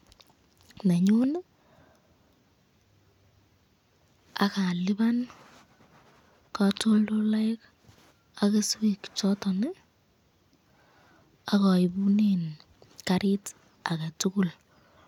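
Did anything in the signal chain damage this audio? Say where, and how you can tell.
No, nothing in the chain audibly damaged this speech recording; no stage leaves any trace at any point.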